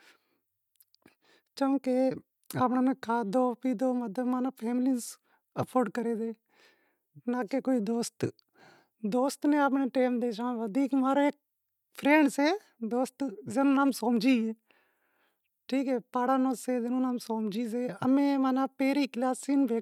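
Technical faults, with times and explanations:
No technical faults can be heard in this recording.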